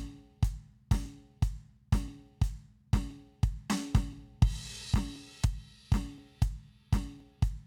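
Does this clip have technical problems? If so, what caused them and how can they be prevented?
Yes: clicks recur every 1.02 s from 1.06 to 7.20 s in this music, a steady rhythm unlike random dropouts, likely clock drift buffer slips dropping or repeating a few dozen samples. Prevent it by locking both devices to one shared word clock or using adaptive resampling.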